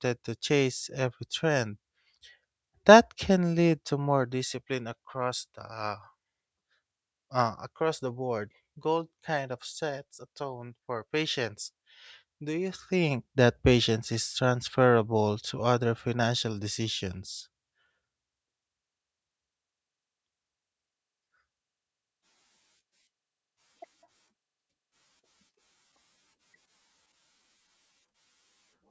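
There are no technical faults to describe in this speech recording.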